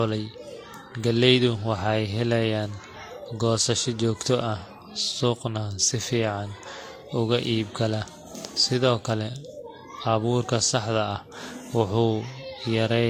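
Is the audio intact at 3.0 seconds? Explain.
No. At 3.0 seconds, as throughout the speech, there are the layered artefacts of transcoding between lossy codecs, likely an HE-AAC encode re-encoded to Vorbis. Nothing sounds above 16.5 kHz. Unlike single-pass compression, two distinct artefact textures overlap, the second encoder's damage compounding the first's.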